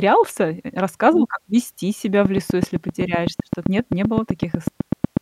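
From 2.25 s, just after "как вести себя", a train of clicks runs to 5.18 s: about twenty near-identical pops at a steady 7.9 per second, ticking over the speech and through its pauses, peaking around 15 dB above the signal. The likely cause is electrical interference or a faulty connection or power supply injecting pulses. On a spectrogram these show as thin, evenly spaced vertical lines spanning all frequencies; the waveform shows matching sharp spikes standing clear of the speech.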